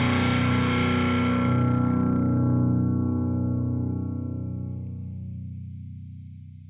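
No audible technical faults anywhere in this recording.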